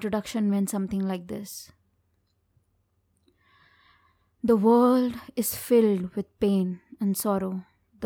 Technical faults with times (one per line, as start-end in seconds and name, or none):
none